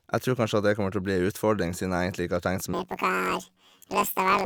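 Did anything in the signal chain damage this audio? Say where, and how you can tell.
Yes, sample-format conversion. From 2.74 s onward the speech jumps an octave with a 47 Hz flutter: planar audio read as interleaved, consistent with 1024-sample blocks.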